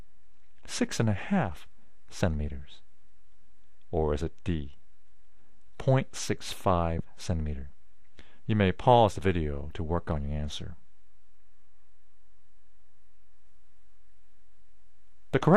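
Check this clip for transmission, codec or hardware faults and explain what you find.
One codec fault runs through the whole clip. The likely cause is MP2 compression at a low bitrate, around 80 kbps by the sound, which starves MPEG Layer II's 32 sub-bands of bits. Upper bands drop out and flicker, leaving a plainly audible dull, gurgling, granular quality throughout.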